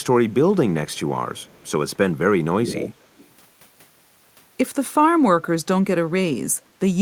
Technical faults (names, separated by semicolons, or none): echo leak